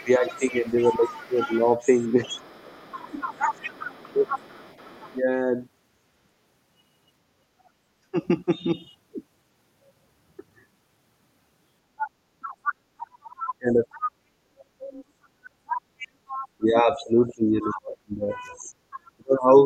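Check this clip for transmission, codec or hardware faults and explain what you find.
Two echo-cancellation faults run through the clip, both tied to a far-end voice reaching the microphone.

Speech suppressed in double talk: from 0.0 to 5.16 s, 13.11 to 14.66 s and 16.58 s to the end, the talker dips and breaks up in pieces, by about 15 dB early on and about 30 dB later. The likely cause is an echo canceller ducking everything during overlapping talk.

Other side's voice leaking through: a second voice sits under the talker from 0.0 to 5.19 s, 7.65 to 7.69 s, 11.98 to 16.48 s, 17.62 to 17.69 s and 18.63 to 19.41 s, about 10 to 40 dB down. It is likely loudspeaker echo that the canceller left in the microphone signal.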